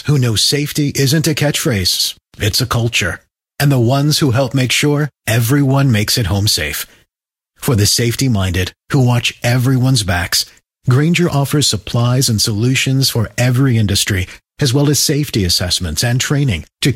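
Repeated frames at 1.98 to 2.10 s, just before "it's a culture": a 116 ms block of compressed audio plays twice, likely five frames, producing a brief stutter and adding 116 ms.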